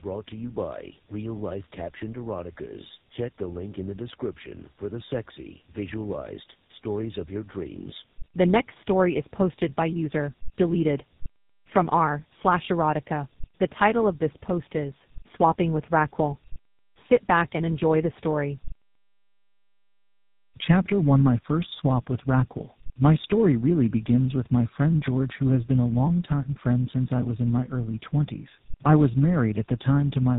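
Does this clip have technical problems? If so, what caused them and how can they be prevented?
Yes, there's tandem speech coding running through the whole speech clip. It sounds like the call passed through two speech coders in a row, most likely AMR-NB at around 7.95 kbit/s, then a G.711 A-law link, then GSM full rate, with each coder chewing on the previous one's output. That stacking is why it comes across rough, muffled and warbly, with nothing above 3.8 kHz. Keeping one codec end to end, or using transcoder-free operation between networks, avoids this.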